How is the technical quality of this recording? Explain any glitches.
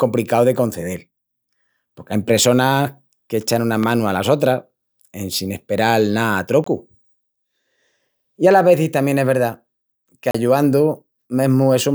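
The recording has three glitches: one loud pop and two blocks of digital silence.

At 3.83 to 3.85 s there is a single loud pop, a sharp transient peaking roughly 10 dB above the speech, with the speech continuing underneath. Its likely cause is a voltage step or pulse entering the chain, from a connector, a switch, static or a driver glitch, which the following circuitry shaped into a brief thump.

The two blocks of digital silence fall at 6.64 s, just after "sin asperal ná a", lasting about 23 ms, and at 10.31 s, lasting about 35 ms. In each, the samples were replaced by zeros, most plausibly because the output buffer was not filled in time. The 23 ms gap fits a 1024-sample buffer. The audio drops to silence and returns abruptly, and the gap is heard as a short hole in the speech.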